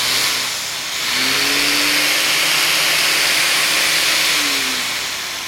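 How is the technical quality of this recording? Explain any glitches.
No glitches can be heard anywhere in this recording.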